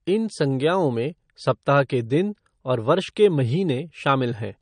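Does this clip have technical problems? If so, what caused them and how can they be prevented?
Yes. Throughout the speech, nothing sounds above 9.6 kHz, and the dull, smeared coding artefacts remain. This is likely low-bitrate audio saved at a high bitrate. The sound fits an MP3 of around 40 kbit/s re-encoded at 256 kbit/s, which cannot restore what was removed. To prevent it, encode once from the original source at an adequate bitrate.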